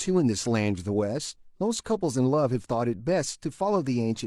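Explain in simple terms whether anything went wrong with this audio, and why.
Listening to the speech in this recording, nothing went wrong that can be heard, so there is nothing to point to or explain.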